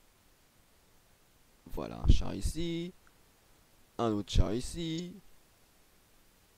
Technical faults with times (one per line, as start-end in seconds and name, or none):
1.74-1.78 damaged data in a compressed stream
4.96-5.00 damaged data in a compressed stream